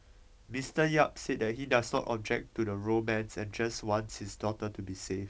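Bit errors on an ADPCM link strike from 1.94 to 2.00 s. Flipped bits at a low rate derail the G.722 decoder's step size and predictor, leaving a brief pop and rough, level-jumping burst.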